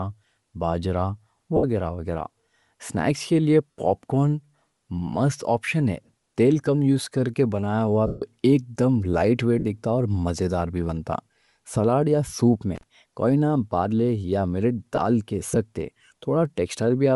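A speech recording has likely passed through Bluetooth LC3 compression, with 7.5 ms frames at a rate that fits roughly 48 kbps. The encoder discards much of the upper spectrum and fills it with noise, so the voice carries a plainly audible breathy, grainy edge throughout. Lost LE Audio frames break up the sound in five places: 1.56 to 1.64 s (about 68 ms), 3.71 to 3.75 s (45 ms), 8.07 to 8.22 s (150 ms, between "یوز کرکے بنایا ہوا" and "ایک دم لائٹ"), 9.59 to 9.66 s (60 ms, just before "دکھتا اور"), and 14.95 to 14.98 s (22.5 ms, right after "نہ بارلی یا ملیٹ"). Each time, the decoder repeats the last spectrum with scrambled signs, so the voice dissolves into a brief noisy smear. In the 150 ms gap it fades toward silence. An intermittent contact, a loose plug or cable briefly opening, cuts the signal from 12.75 to 12.83 s. The line is open for about 34 ms, leaving faint hiss between crackles at the break and the reconnection.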